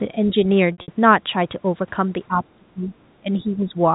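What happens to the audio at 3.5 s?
From 3.2 to 3.75 s the speech sinks by around 10 dB, likely speech suppressed in double talk as the echo canceller turns down its own talker along with the loudspeaker echo. The waveform narrows noticeably there.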